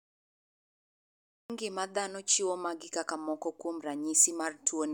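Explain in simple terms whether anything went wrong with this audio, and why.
The recording started late, a cut-off start. The first 1.50 seconds are dead digital silence, and at 1.50 s the speech appears suddenly, mid-sound, with no natural lead-in, right at "ng'ima dhano chiwo magi". Whatever came before that point was never captured.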